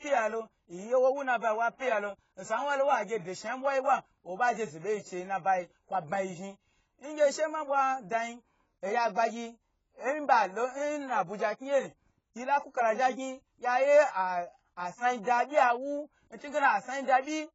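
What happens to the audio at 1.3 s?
At 1.3 s, as throughout, the speech sounds dull and smeared, with nothing above 7.7 kHz. Likely AAC compression, coarsely quantised at a low bitrate.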